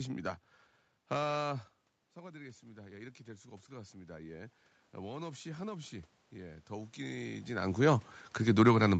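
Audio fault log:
2.14 to 7.9 s, automatic gain rising: the talker moves back from the mic around 1.5 s and the input drops by about 15 dB. The automatic gain control then slowly pushes its gain up by about 12 dB over almost six seconds to compensate. It lifts the whole input, so the room noise swells right along with the speech, and the speech never quite gets back to its starting level.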